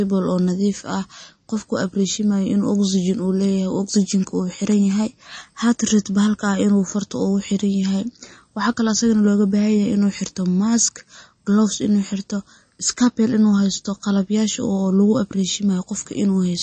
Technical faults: MP3 compression

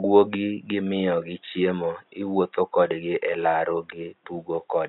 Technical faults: none

